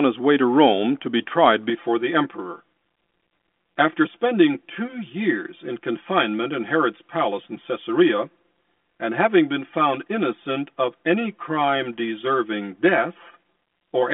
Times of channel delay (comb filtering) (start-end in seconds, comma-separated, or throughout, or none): 1.70-14.13